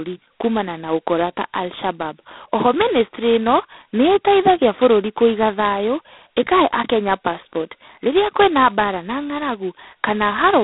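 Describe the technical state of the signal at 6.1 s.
At 6.1 s the speech carries G.726 ADPCM damage present across the whole clip: heavy, level-following rasping hiss, which fits the 16 kbit/s mode's two-bit prediction errors. A spectrogram shows a 200 Hz to 3.6 kHz band, empty above 3.9 kHz, with grainy noise tracking each syllable.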